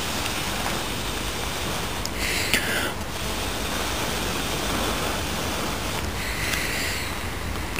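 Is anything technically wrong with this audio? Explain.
Yes. Two related interference faults from a nearby 2G handset are audible, one running directly into the other.

From 1.74 s to 3.25 s there are GSM signalling bursts. The phone is transmitting only short groups of radio bursts, as a handset does while signalling to the network. Something in the audio circuit rectifies that RF energy, turning each group into a tick or brief buzz. The result is a galloping dit-dit-dit pattern built on a 217 Hz repetition, sitting only a few decibels below the wanted sound.

From 3.25 s to 5.98 s the pattern becomes a continuous GSM phone buzz. Once the call is established, the handset transmits its bursts steadily at 217 per second, and the same rectification now produces an unbroken tone at that rate. Because the bursts are sharp-edged pulses, the buzz is hard and raspy, with a dense series of harmonics above 217 Hz. 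It sits about 14 dB below the signal and bears no relation to the program material.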